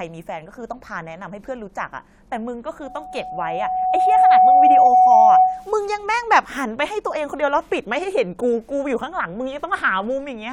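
A loudspeaker feedback squeal runs through this speech clip from 2.83 to 5.70 s: the microphone is picking up the loudspeaker it drives, and at 743 Hz the loop gain has gone above one, so that frequency keeps feeding itself. It is heard as a single steady tone that swells over roughly a second and a half and settles at around 10 dB above the speech before it stops.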